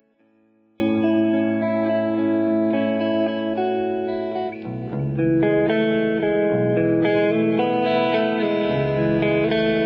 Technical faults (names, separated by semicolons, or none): one channel inverted